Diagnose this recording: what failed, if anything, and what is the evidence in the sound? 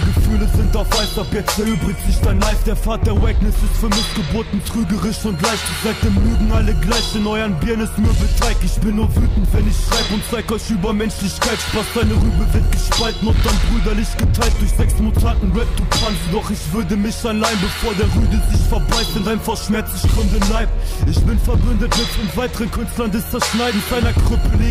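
A train of clicks runs from 11.59 to 13.55 s. About fifteen similar pulses, at roughly 6.7 per second, irregularly spaced, reach the signal's level. Likely electrical interference entering the analogue wiring.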